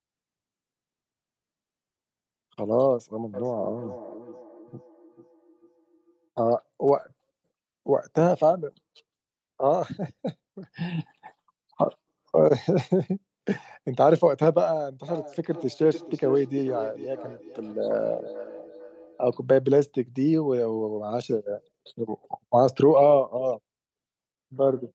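Speech with feedback echo between two devices from 3.34 to 6.29 s and from 15.08 to 19.34 s. Another device's playback re-enters the microphone, so each word returns roughly every 0.4 s, peaking about 21 dB and then about 16 dB below the speech. A spectrogram shows evenly spaced, fading ghost copies of each syllable, and the waveform shows matching decaying repeats.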